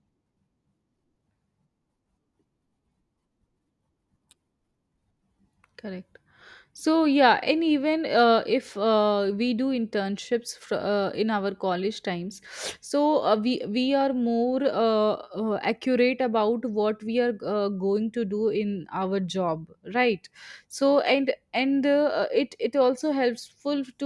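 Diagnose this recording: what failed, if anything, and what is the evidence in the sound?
Nothing in the speech signal points to a failure at any stage, from the wiring and converter through to storage and playback.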